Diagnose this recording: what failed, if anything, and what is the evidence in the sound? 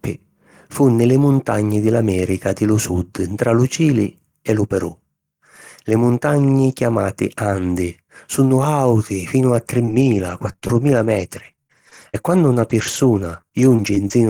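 The network stage failed with scattered short gaps from 9.73 to 14.12 s: around fifteen lost or late packets, none longer than about 40 ms, each patched by extending the preceding sound. On a spectrogram these appear as brief smeared, flattened patches; the waveform shows repeated cycles.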